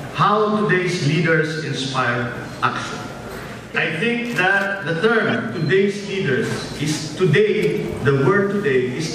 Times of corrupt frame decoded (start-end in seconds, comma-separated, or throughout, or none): 3.50-3.55, 5.27-5.35, 7.76